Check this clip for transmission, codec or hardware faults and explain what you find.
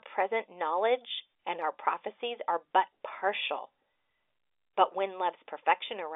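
No faults turn up in this speech clip: it carries the band-limited sound of an ordinary G.711 telephone line, consistent with A-law coding at 64 kbps, with energy confined to roughly 300 Hz to 3.6 kHz and at most a faint, level-following quantisation hiss beneath it.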